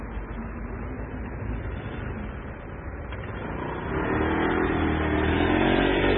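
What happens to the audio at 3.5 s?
At 3.5 s the sound is still carrying the heavy damage that runs through the whole clip, most likely MP3 compression at a very starved setting that fits roughly 16 kbps. Nothing remains above 4 kHz, and weak frequency components flicker in and out from frame to frame, giving a watery, swirling texture with smeared attacks. That flicker is what separates it from a simple low-pass filter, which would dull the top end but leave the rest clean.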